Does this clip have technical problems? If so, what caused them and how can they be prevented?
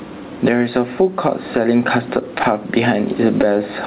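Yes. Gain pumping runs through the whole speech clip. The room noise sits about 34 dB below the speech, and the gain swings by around 10 dB, leaving loud and quiet syllables squashed close together. This is likely caused by microphone gain set far too high, so a fast limiter clamps down on every loud sound and releases in the gaps. The band-limiting at 4 kHz is consistent with an ordinary G.711 A-law call path. Lowering the input gain so the limiter rarely engages would prevent the pumping.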